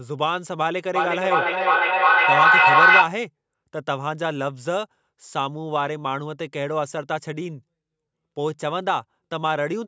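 From 0.95 to 3.21 s the speech comes back roughly every 0.4 s, each repeat thinner and more ringing, building to about 10 dB above the speech. This is feedback echo between two devices: one device replays the other's microphone, which recaptures it beyond its own echo canceller's reach.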